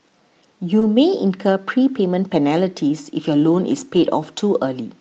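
At 0.79 s a short concealed packet loss leaves about 20 ms missing. The decoder extends the preceding speech to bridge it, producing a brief smear or wobble. From 0.81 to 0.83 s, lost packets rebuilt from error correction take over, with a low-bitrate Opus copy standing in for one lost frame and sounding rougher. Between 3.95 and 4.05 s a second repair replaces 60 ms of speech, which fits three lost packets. That stretch has audibly coarser, noisier texture, set against the call's roughly 8 kHz audio bandwidth.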